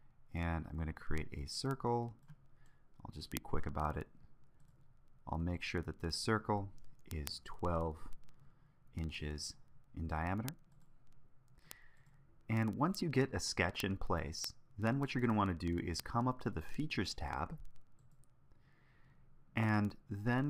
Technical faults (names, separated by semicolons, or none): word clock ticks